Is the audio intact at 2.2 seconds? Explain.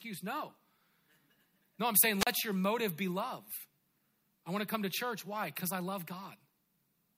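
No. A wireless microphone squelch dropout follows "I'm saying" from 2.19 to 2.27 s. The fading FM signal raises hiss, then squelch mutes for 37 ms. That hiss distinguishes it from a clean digital gap.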